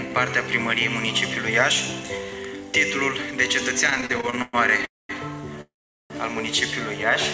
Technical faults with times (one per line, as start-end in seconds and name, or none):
3.87-4.85 repeated stalls (stutter)
4.85-5.11 call audio freeze
5.61-6.12 call audio freeze